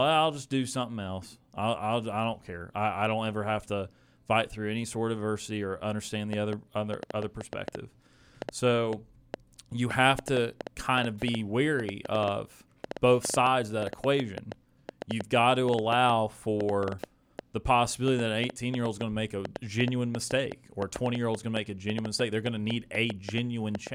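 From 6.33 s, right after "of adversity or understand", a train of clicks runs to 23.88 s, near the end of the speech. Roughly a hundred similar pulses arrive at about 5.25 per second but unevenly spaced, and they stand roughly 10 dB above the speech, so they read as sharp ticking over the talker and through the pauses. The likely cause is interference from nearby equipment or a faulty connection or power supply injecting repeated impulses.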